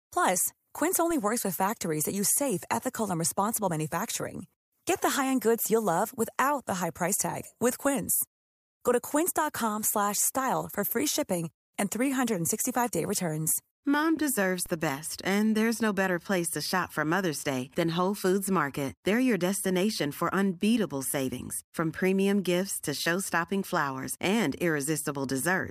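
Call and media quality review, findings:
DC step at 1.11 s, just before "works with factories that", and again at 14.66 s: zero line jumps about -33 dBFS, heard as a low thump, then bleeds away through a 20 Hz high-pass.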